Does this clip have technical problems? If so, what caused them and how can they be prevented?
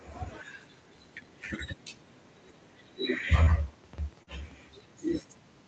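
Yes. A very faint delayed copy of the speech trails behind it from 0.67 to 0.92 s and again from 5.27 to 5.45 s, lagging about 0.22 s. This is likely an echo leak: the far end's loudspeaker output reached its microphone and was not fully removed by its echo canceller. Using headphones at that end, or improving its echo cancellation, prevents it.

Brief smears occur at 3.43 to 3.50 s and 4.23 to 4.30 s. These are short concealed packet loss: about 40 ms went missing each time and the decoder extrapolated the preceding sound. A steadier network connection with less jitter prevents it.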